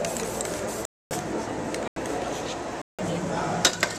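Three abrupt holes: 0.85–1.11 s (256 ms), 1.88–1.96 s (85 ms) and 2.82–2.99 s (171 ms). Each is a block of digital silence, likely where output buffers went unfilled and were zeroed, with the second and third lengths matching 4096- and 8192-sample blocks.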